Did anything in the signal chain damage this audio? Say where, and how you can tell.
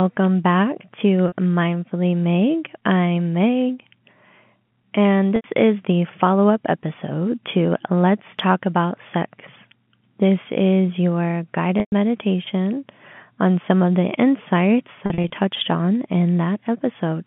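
Yes, in the network stage. The speech briefly holds a buzzy, repeated pitch at 1.28 s (40 ms), 5.36 s (80 ms) and 11.8 s (120 ms, fading to silence), and stutters in short bursts across 15.06–15.30 s. This is packet loss with pitch repetition. Lost packets on the G.711 telephone call were concealed by looping the last pitch period.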